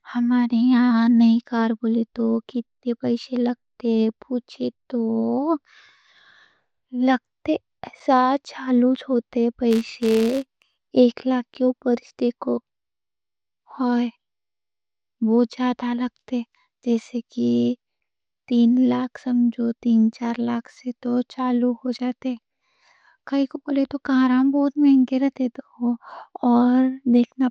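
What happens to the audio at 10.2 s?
At 10.2 s you're in the middle of a stretch, from about 9.71 to 10.89 s, where a filter restarted on every block. The filter drops its memory at each block boundary and starts from silence, so every block opens with a tiny transient. Those clicks repeat at 188 Hz, which fits a 256-sample block, and they blur into a buzz that rises and falls with the speech level. It clears just before "ایک لاکھ کے".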